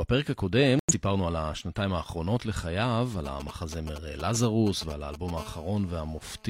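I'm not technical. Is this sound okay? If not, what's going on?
No, it isn't. There are three problems.

From 0.79 to 0.93 s the speech drops into silence for about 0.14 s. This is a corrupt frame muted. The recording is stored in small compressed chunks, and two of them were damaged. The player couldn't read them, so it played nothing in their place. The gap starts abruptly. The timing afterwards stays correct.

From 3.26 to 5.38 s there is a galloping dit-dit-dit of ticks and short buzzes. These are GSM signalling bursts. An older 2G mobile phone was close to the equipment and briefly talking to its network. The audio wiring picked up those radio pulses and turned them into sound. The pattern repeats about 217 times a second inside each burst. It is quite loud against the speech.

From 5.38 s to about 6.44 s the ticking changes into a steady, harsh, raspy hum. This is GSM phone buzz. The same phone now seems to be in an actual call, sending radio pulses continuously at 217 per second. 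The wiring again turns them into sound, so you hear a constant buzz with a gritty edge. It is quieter than the earlier bursts, but it runs steadily under the speech.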